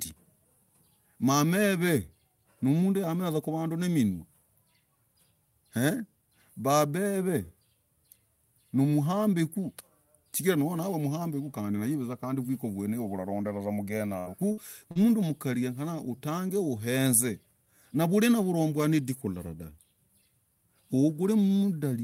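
Everything happens in under a second of the speech, starting at 14.19 s with a burst of packet loss running to about 14.28 s. A run of audio never arrived in time, so the receiver kept stretching the last sound for about 66 ms, letting it sag in level, and then jumped ahead. You get a held, fading buzz or hiss, and about 60 ms of the actual speech is simply gone.

Right at the tail of that burst, from 14.26 to 14.28 s, one 20 ms stretch is a lost packet rebuilt from error correction. The following packet carried a cheap low-bitrate copy of it, and the decoder played that instead of inventing more sound. It's a touch grainier and noisier than its surroundings.

A second burst of packet loss hits at 14.52 to 14.59 s. This time the fill lasts about 53 ms before the audio skips forward, with another 60 ms of speech lost.

Then at 14.91 to 14.97 s, just before "mkarii genyekana utange", there's a short concealed packet loss. 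About 40 ms went missing, and the decoder patched it by extrapolating the preceding sound and easing back into the real signal. It comes across as a quick smear or wobble rather than a gap. The last 20 ms of it, from 14.95 s, was again rebuilt from the error-correction copy, so it has that same rougher texture.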